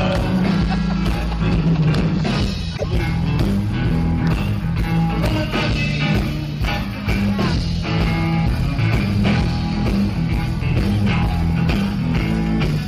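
At 2.73 s, lasting about 0.11 s to 2.84 s, there is damaged data in a compressed stream: a short stretch of the encoded data is corrupt, so the decoder misreads those frames, loses sync and hunts for the next valid frame header. It comes through as a brief chirp, squawk, click or short hole.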